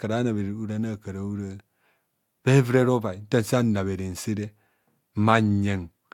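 No technical faults can be heard anywhere in this speech recording.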